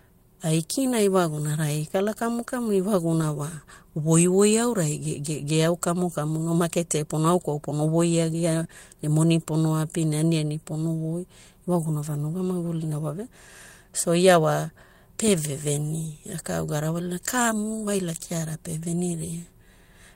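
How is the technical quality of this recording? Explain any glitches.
Two kinds of packet-loss glitch are audible in the speech, both brief and both covered over rather than left as gaps.

Lost packet rebuilt from error correction, 3.21 to 3.23 s: one packet went missing, but the next packet carried a low-bitrate backup copy of it, which the decoder played in its place for 20 ms. Nothing drops out. Because the stand-in was coded at much lower quality, that moment sounds rougher and noisier than the audio around it. If the call was full-band, the top frequencies also dip there, since the backup copy does not hold them and the decoder only estimates them.

Short concealed packet loss, 8.63 to 8.67 s and again straight after, 8.67 to 8.71 s, between "pono voiagia" and "ne moni": two consecutive 20 ms stretches never arrived in time, and no backup copy was available. The receiver invented about 17 ms of fill for each by extending the preceding sound, following its pitch if it was voiced or using shaped noise if not, then blended back into the real signal. 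The result is a short smear or wobble across that join, and a brief sound such as a consonant may be lost.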